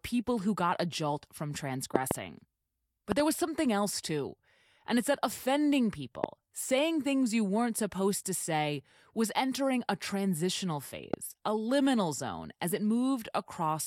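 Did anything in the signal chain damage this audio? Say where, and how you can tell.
Yes. A sudden voltage step, likely from a plug, switch or static discharge in the analogue wiring, was added to the signal four times, producing loud pops. There are double pops at 1.96 to 2.13 s and 3.12 to 3.22 s and single ones at 6.24 to 6.26 s and 11.14 to 11.16 s. Each peaks about 20 dB above the speech, a sharp thump laid on top while the speech carries on beneath it.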